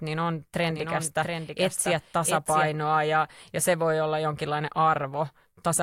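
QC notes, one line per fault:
0.69–2.69 s, doubled audio track: Just after "niin on", the speech is joined by a second, full-band copy of itself trailing roughly 0.7 s behind and about 5 dB quieter, so the voice overlaps itself. The copy has no reverb tail or room colouring, and it cuts in and out abruptly, ending before "ja ja se voi". This is likely a second capture through a slower path or an edit that left two misaligned copies in the mix.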